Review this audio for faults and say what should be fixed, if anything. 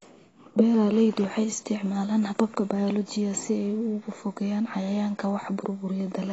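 The speech was likely squeezed through AAC compression at a low bitrate, with AAC-LC quantising each block of frequency lines so coarsely that whole regions of the spectrum were dropped or roughly approximated. Throughout the clip, nothing is present above 7.9 kHz, so the top end sounds dull, and the codec damage is plainly audible as a smeared, warbly texture on sustained sounds and fizzy sibilants, which fits a rate of around 24 kbps. To prevent it, encode at a higher bitrate or keep a lossless copy for any stage that needs full bandwidth.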